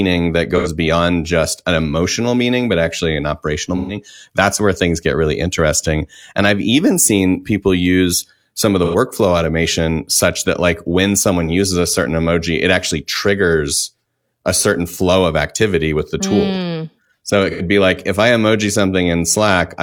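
AAC frame loss with concealment hits at 0.56–0.68 s (before "beyond just an emotional"), 3.76–3.96 s (between "but actually an operational" and "that's where things get"), 8.84–8.96 s (between "use some of the" and "automation such that like"), and 17.50–17.62 s. Each patch is filled from the last good spectrum, so it sounds smeared and phasey rather than dropping to silence.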